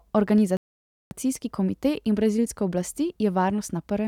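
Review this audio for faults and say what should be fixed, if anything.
Clock drift buffer slips: from 0.38 s to 3.98 s there is a click roughly every 1.02 s, about four in all, each a jump of a few samples in the speech. The steady spacing suggests these are likely buffer slips between two devices on independent clocks disagreeing by something on the order of 150 ppm, so the buffer slowly fills or drains and then drops or repeats a short block. The fix is to share one clock between the devices or add adaptive resampling that tracks the drift.

Playback stall: at 0.57 s the speech cuts out abruptly and stays silent for about 0.54 s, until 1.11 s. The output then resumes. This is likely the player running short of data or its audio thread being blocked, leaving nothing to play until it caught up. The fix is to give the playback path a larger or better-managed buffer and keep the audio thread free of blocking work, with higher scheduling priority.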